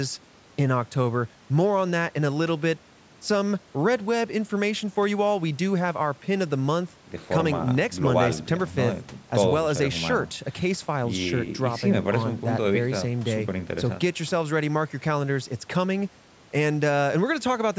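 Speech with no technical faults to point to. It has come through a call's microphone processing, which tops out at 8 kHz and trims the lowest bass as that path normally does.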